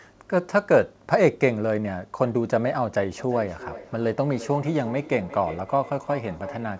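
From 3.18 s to the end at 6.8 s there is feedback echo between two devices. Two devices in the same room share the call. One plays out what the other's microphone sent, and that microphone captures it again. Each device's echo canceller removes only its own playback, so the loop survives. The speech returns roughly every 0.4 s, thin and ringing, peaking about 16 dB below the direct sound. Nothing is heard above 8 kHz, which fits a G.722 call codec.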